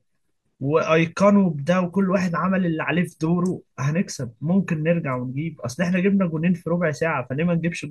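No technical faults can be heard.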